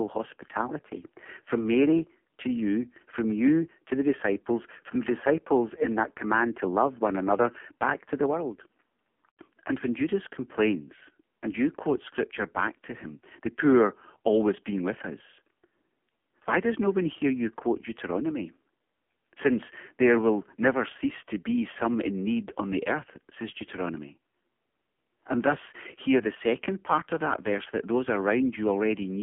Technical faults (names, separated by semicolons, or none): AMR narrowband mobile codec